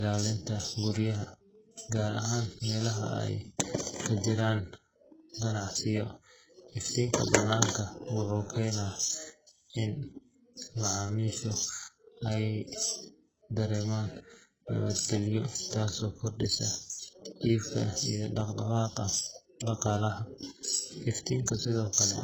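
From start to finish the treble is gritty and lispy, with nothing above 8 kHz; that's likely HE-AAC compression at a very low bitrate, rebuilding the top end by copying lower bands upward. Sample clock jitter runs throughout as well: the converter's timing wobbles by a microsecond or two, adding a faint hiss and roughness, about 30 dB down, that grows on loud, bright sounds.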